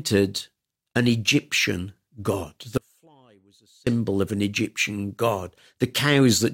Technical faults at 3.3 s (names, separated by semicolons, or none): audio dropout to a faint residue